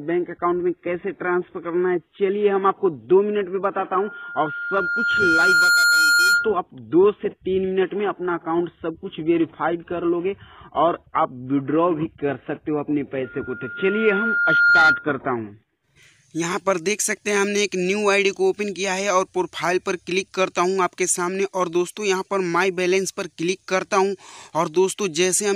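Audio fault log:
3.98–6.57 s and 13.24–15.08 s: loudspeaker feedback squeal. A single 1.4 kHz tone swells over roughly two seconds the first time and about one and a half the second, ending some 5 dB and 10 dB above the programme respectively. The microphone is re-amplifying its own loudspeaker, with loop gain above unity at that frequency.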